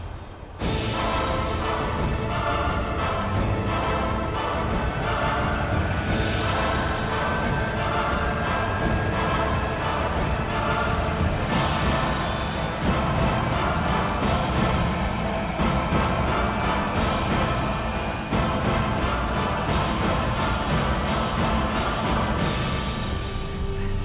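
Nothing in this audio stands out as a technical fault.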